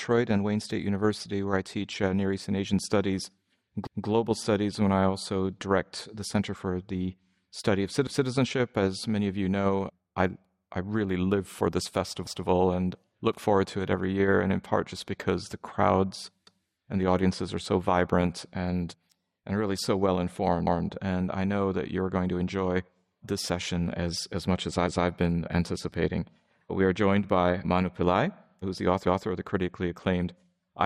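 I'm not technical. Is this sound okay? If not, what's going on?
No. Brief stutters at 3.87, 12.27 and 16.47 seconds replay a fifth of a second. This is overlapping chunks: each 4-second piece starts before the last ends.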